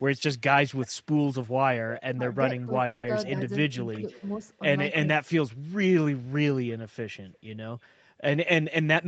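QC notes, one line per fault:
0.78–0.88 s, 1.89–2.02 s, 2.58–2.65 s, 3.92–4.30 s and 5.04–5.08 s, echo leak: a faint delayed copy of the speech trails in about 350 ms behind, sitting roughly 15 to 25 dB under the talker. It's likely the far end's loudspeaker getting past an echo canceller that didn't fully catch it.
2.16–2.25 s, 2.65–2.72 s and 4.02–4.43 s, speech suppressed in double talk: the talker dips by about 10 dB on the first two and about 5 dB on the last, in short bites. It's likely an echo canceller unable to tell talker from echo, so it turns both down.
2.85–3.05 s, call audio freeze: the sound hangs and carries on as a fading buzz for about 180 ms, never going fully silent, then picks up exactly where it left off with nothing lost. That's likely delayed packets draining the jitter buffer, with the receiver stretching the last sound.
8.58–9.04 s, jitter buffer speed-up: the tail runs about 9% fast at the same pitch and feels a bit rushed, with about 50 ms trimmed out in small pitch-period slices as the buffer sheds built-up delay. 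The band, topping out at 8 kHz through the Opus path, stays the same.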